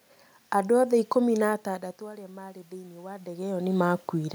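From 1.64 s to 4.3 s there is automatic gain rising. The voice input fell by about 17 dB as the talker moved away. The gain control slowly added about 6 dB. Voice and room noise swell together.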